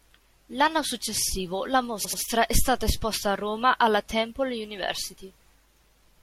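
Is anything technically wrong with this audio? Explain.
Yes, this speech has repeated frames. At 2.04 to 2.21 s, an 85 ms block of compressed frames was written twice more, so the decoder replays it and stutters. At 4.96 s, a 2.7 ms block repeats five extra times, causing a brief stutter. Together, the repeats lengthen the audio by about 0.18 s.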